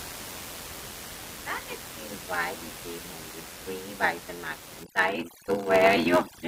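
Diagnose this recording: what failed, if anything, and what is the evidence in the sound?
A steady buzz at 86.1 Hz runs through the whole clip. The speech also plays slow, at 0.861 times normal speed, while the pitch stays about right. This is a block size mismatch (padded) in the driver or buffer stage. One stage hands over blocks shorter than the next one reads. The read size fits a 512-sample buffer. The leftover part of each block is filled with zeros. That puts a tiny gap in every block, which repeats 86.1 times a second and stretches the timing.

From 4.83 s to the end at 6.47 s, there is overdone noise removal in the call processing stage. The room noise sits about 14 dB below the speech before this point. Here it drops and breaks up into twinkling specks. The suppressor is set too hard. It shuts off any frequency band that lands near its noise estimate, and it strips the quiet parts of the speech along with the noise.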